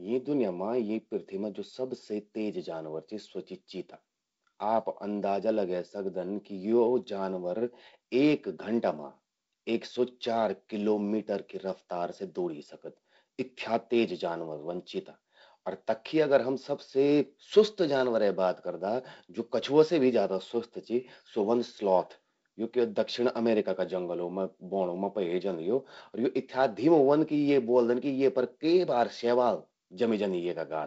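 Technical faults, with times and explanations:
No technical faults detected; the speech carries the light hiss and band limit of G.722 wideband telephone coding, with nothing above about 7.7 kHz and a slightly noisier low band consistent with its 48 kbit/s mode.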